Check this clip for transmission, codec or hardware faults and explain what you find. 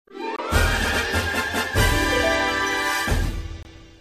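Two brief digital broadcast dropouts occur. At 0.36 to 0.39 s and again at 3.63 to 3.66 s, the sound cuts to silence and then resumes, each gap consistent with a single lost frame of about 24 ms that the receiver muted.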